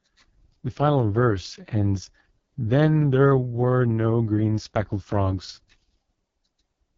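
The whole clip runs through the AMR wideband (HD Voice) codec at what sounds like its lowest mode, around 6.6 kbit/s. The speech model is starved of bits, so the speech turns rough and raspy, with nothing above 7.4 kHz.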